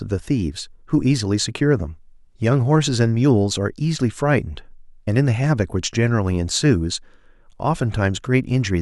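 No technical faults can be heard anywhere in this speech recording. Nothing in it calls for a time or a value to be noted.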